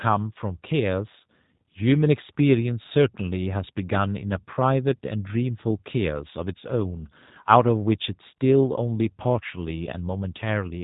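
Throughout, G.729 coding rebuilds the speech from a vocal-tract model at a rate consistent with 8 kbit/s, sounding rough and synthetic. A spectrogram shows nothing above 3.8 kHz.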